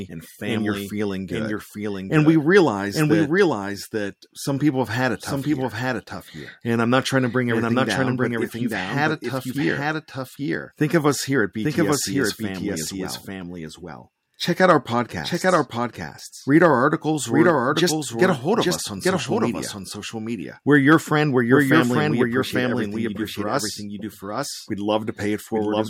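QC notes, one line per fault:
Throughout, doubled audio track: the whole speech runs twice, with a second copy trailing roughly a second behind and sitting a bit quieter, around 5 dB down. It's the full band, not a reflection, so there's no decay or room colour on it, just a clean, dry repeat stepping on the original the entire way. Likely the same feed got captured again through a slower path and both ended up in the mix.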